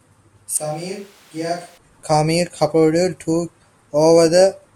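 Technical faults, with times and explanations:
0.57–1.78 s, switch to a distant microphone: the speech abruptly turns roomy and hollow, thinner in the bass and roughly 10 dB quieter, with room noise rising, then snaps back. The likely cause is a far microphone standing in; unlike a plain gain dip, added reverberation and noise give it away.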